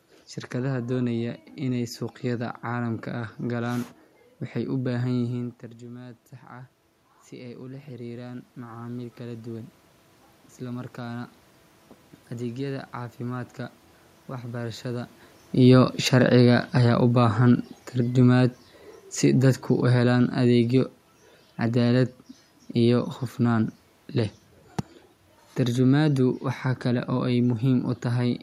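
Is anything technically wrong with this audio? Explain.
Yes, there are two automatic gain control faults.

From 5.37 to 15.13 s there is automatic gain rising. At about 5 s the level at the microphone drops by about 15 dB as the talker moves away. The gain control then raises its gain by about 12 dB over roughly ten seconds, so the speech and the room noise behind it swell up together.

From 15.55 to 23.67 s there is automatic gain falling. Around 15 s the talker moves again. The control then pulls its gain down by about 7 dB over about eight seconds, and the voice and background sink together.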